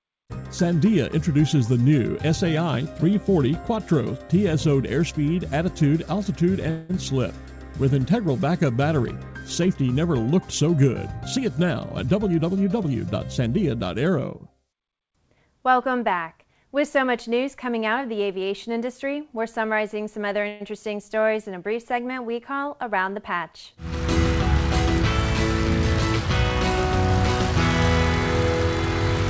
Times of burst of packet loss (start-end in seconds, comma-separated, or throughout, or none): none